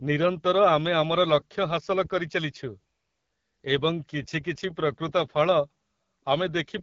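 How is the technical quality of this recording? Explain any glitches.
The recording is clearly degraded by low-rate codec coding throughout. The fault is the AMR wideband (HD Voice) codec. It models the vocal tract with pulse excitation and fills the top band with shaped noise. The roughness fits the 8.85 kbit/s mode. The speech sounds rough and raspy. Nothing is present above 7.5 kHz.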